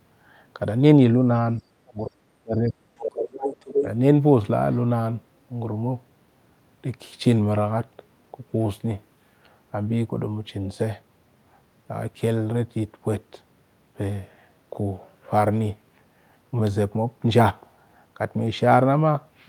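From 1.83 to 3.0 s the speech is suppressed in double talk. For roughly a second the talker's level sinks in patches, at worst by something like 35 dB, which is close to a cutout. The likely cause is the echo canceller treating simultaneous talk as echo and turning everything down. On a waveform the envelope collapses into gaps and thin stretches. A spectrogram shows the harmonics fading in patches.

From 3.01 to 3.86 s the other side's voice leaks through. A second voice sits only a little below the talker's level, so it is plainly audible. This likely comes from loudspeaker playback that the canceller failed to remove from the microphone. A spectrogram shows a second, unrelated harmonic pattern laid over the talker's. From 3.81 to 3.86 s a brief further dip of a few dB appears as a small notch in the envelope.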